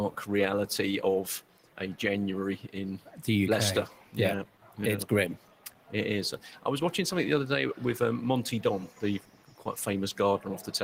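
A noise suppressor meant for speech stays on across the whole clip, applied to music or sounds it was never built for. It treats steady tones and decaying tails as noise. Attacks pass through, but sustained parts and tails sink. The level swings by about 10 dB as it clamps and releases. The result is a pumping, fluttering sound. The texture thins whenever the sound holds still.

Eight passages are cut harder by the noise suppressor. They run at 1.41 to 1.8 s, 2.98 to 3.2 s, 3.87 to 4.16 s, 4.45 to 4.79 s, 5.36 to 5.93 s, 6.38 to 6.65 s, 8.87 to 9.03 s and 9.19 to 9.66 s. Each lasts roughly 150 to 500 ms. The deepest drops reach about 10 to 11 dB. Held and fading sound dips sharply here, and its decay is chopped short.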